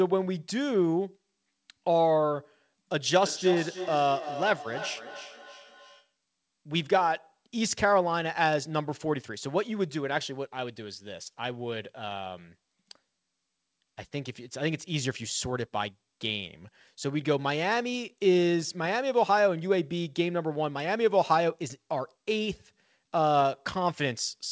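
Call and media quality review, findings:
Feedback echo between two devices, 3.22–6.14 s: speech returns at a steady interval of roughly 300 ms, thinner and ringing, peaking about 11 dB below the direct speech. Second device in the room replays the first device's microphone audio back into that live microphone; the first device's canceller ignores it.

Call path: band-limited, nothing above 8 kHz, which fits G.722 at 64 kbps.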